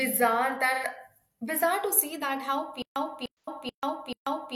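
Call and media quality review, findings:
AAC frame loss with concealment at 0.73–0.84 s, just before "bizarre to see that", and 3.39–3.48 s, just after "bizarre to see that". Each is about 85 ms, fitting two lost frames. Decoder fills from the last spectrum, giving a smeared, noisy patch with blurred harmonics on the spectrogram.

Stutter with silent gaps from 2.82 s to the end. A 297 ms burst repeats every 435 ms, with 138 ms of flat digital silence between. The waveform shows identical blocks separated by zero-line gaps. Likely cause is a stream stall replaying the last fragment.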